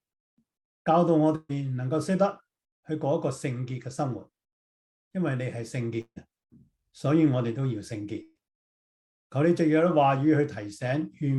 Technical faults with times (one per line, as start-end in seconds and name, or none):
1.35-1.51 burst of packet loss
6.01-6.18 burst of packet loss
8.22-8.41 burst of packet loss